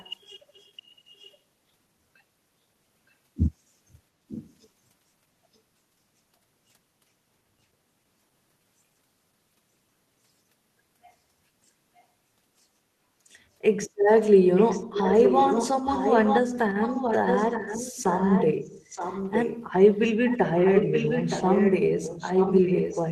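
Speech with an echo leak: a delayed copy of the voice trails it by about 0.92 s. It comes in short, faint scraps at 0.0–0.14, 0.52–0.71 and 1.16–1.37 s, louder at 4.28–4.54 s, then long and nearly as loud as the speech at 14.57–16.41, 16.81–18.53 and 18.88–23.1 s. The fixed, long delay separates it from room reverberation, and is likely from a far-end echo canceller failing to suppress loudspeaker pickup.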